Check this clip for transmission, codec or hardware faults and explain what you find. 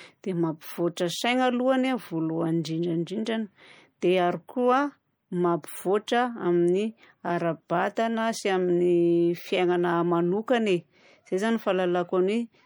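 One fault runs through the whole clip. The speech has most likely passed through MP3 compression at a bitrate consistent with 64 kbps. Short of bits, the encoder let weak frequency lines flicker between frames, giving plainly audible watery swirl, metallic chirps on s sounds and smeared attacks.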